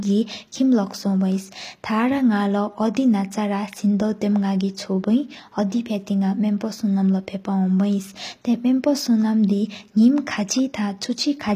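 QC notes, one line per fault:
throughout, HE-AAC compression: likely low-bitrate coding, fitting about 24 kbps, rebuilds the treble from copied lower bands, giving plainly audible mismatched, synthetic-sounding highs, with nothing above 14.9 kHz.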